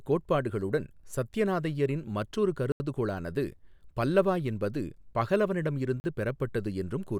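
At 2.72 s, right after "கோட்பாடுகளுடன் சத்யநாதையரின் மற்றொரு", the speech drops into a block of digital silence lasting 80 ms, until 2.80 s. The audio there is silent. The signal stops and restarts with no fade. It sounds like a short hole. A second block of silence follows at 6.00 s, lasting 40 ms. Being shorter, it comes across more as a quick pop.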